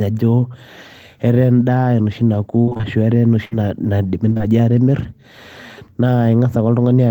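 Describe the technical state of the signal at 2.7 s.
Repeated packet loss (robotic sound) runs from 2.61 to 2.85 s, covering the 2.7 s moment. Audio arrives late or not at all several times in quick succession, leaving about five short holes. The longest is 59 ms. The decoder covers each hole by stretching the last sound it received, which fills about 136 ms, or 57% of the stretch. About 140 ms of the real signal is missing. The speech sounds choppy, with fragments dropping out.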